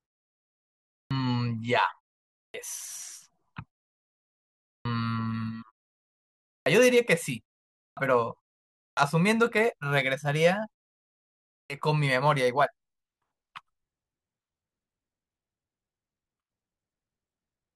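Speech with a clipped start after a pause at 0.97, 2.40, 4.71, 6.52, 7.83, 8.82 and 11.56 s. Each time, about 0.14 to 0.15 s of onset is lost, so speech begins abruptly without its first sounds. The output device sleeps during the 0.45 to 1.08 s silences and is slow to wake.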